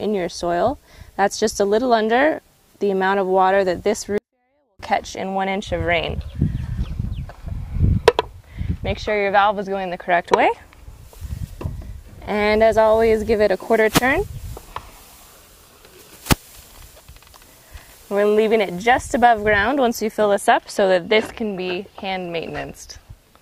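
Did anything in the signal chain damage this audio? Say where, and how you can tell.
Yes. From 4.18 to 4.79 s the sound stays clean but drops by about 48 dB, nearly inaudible. This is a 24-bit alignment error at the sample-format conversion stage. Samples sitting in the low bytes of 32-bit words were read as full 32-bit integers.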